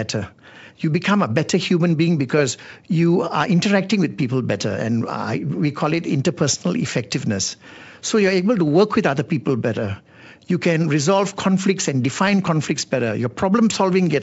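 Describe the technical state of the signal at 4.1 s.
At 4.1 s the signal is intact, with the speech carried cleanly through G.722 wideband telephone coding at 64 kbit/s and only a faint upper-band hiss at most.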